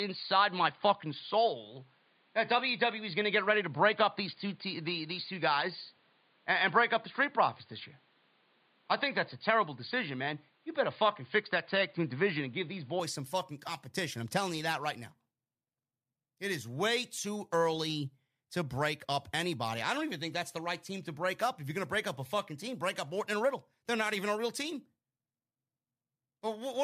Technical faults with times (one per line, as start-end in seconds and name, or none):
0.00-13.00 input switched to a poorer device